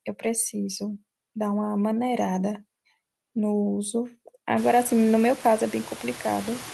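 A speech clip with noise suppressor artifacts throughout. The suppressor pulls steady background noise down by about 17 dB, frame by frame. So the noise dips between phrases and swells back under the voice. The effect grows after roughly 4.5 s, when the room noise jumps by about 24 dB and sits only about 15 dB below the speech. The suppressor then works harder on it. The sound also passed through a call codec. Its top end stops near 12 kHz, which points to Opus at a moderate bitrate around 32 kbps.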